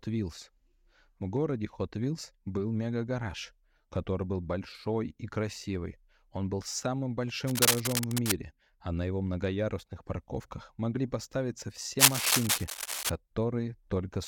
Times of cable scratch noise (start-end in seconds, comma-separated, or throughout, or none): 7.47-8.36, 11.99-13.10